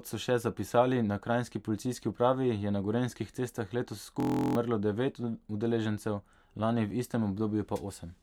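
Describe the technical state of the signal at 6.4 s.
At 6.4 s the speech signal is intact, with no audible fault at that moment.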